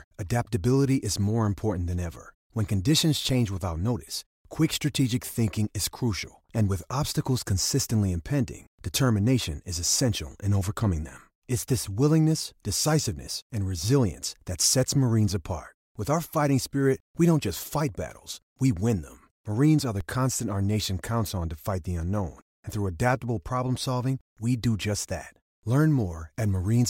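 A low thump at 3.29 s, just before "without notice quick strategic", and again at 20.01 s, between "are the" and "constant our nation counts", marks a DC step: the waveform's zero line jumps by about −24 dBFS, then decays away through a 20 Hz high-pass.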